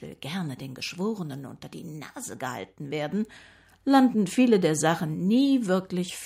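A speech recording in which, at 3.12 s, the voice and the background noise both jump abruptly louder by about 6 dB and stay there. This is a microphone volume stepped up fault: the calling software judged the input too quiet and raised the device's gain in a single step.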